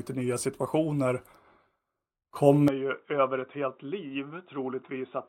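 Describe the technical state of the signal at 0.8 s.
At 0.8 s the speech signal is intact, with no audible fault at that moment.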